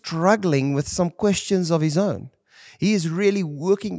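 No technical faults are audible anywhere in the recording.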